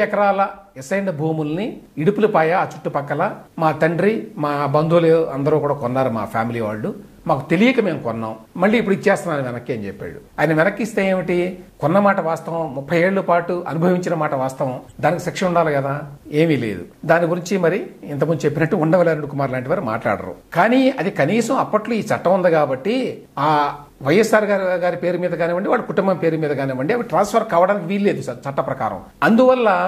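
At 14.89 to 14.92 s, a corrupt frame decoded: one damaged frame played with wrong gains or misread codes, giving a brief, quiet burst of error near about -35 dBFS rather than a dropout's silence.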